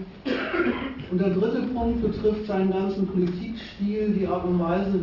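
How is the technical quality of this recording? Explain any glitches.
The recording has one fault, aliasing, running through the whole clip. The sample rate was cut without an anti-aliasing filter, so content above 6 kHz (consistent with a drop to a 12 kHz rate) folds back below it as unrelated, gritty tones roughly 30 dB under the sound. Unlike a plain low-pass cut, the high band isn't simply dulled. It is replaced by metallic tones that don't follow the original pitch, and the spectrum stays full right up to the 6 kHz edge.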